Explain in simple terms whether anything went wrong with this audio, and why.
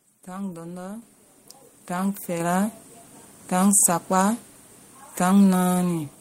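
The microphone volume stepped up twice: the call software raised the input level, so speech and background jumped louder together at 1.02 s, after "tan lɔndɔ", and again at 2.4 s.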